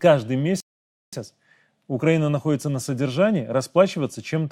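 At 0.60 s the speech halts in a rebuffering stall: playback runs out of downloaded audio, and the output falls silent until more data arrives at 1.13 s. The gap adds 523 ms to the running time. Unlike a dropout or packet loss, where a piece of the sound is skipped, the speech here picks up at exactly the point where it stopped, so nothing is missing and only time is added.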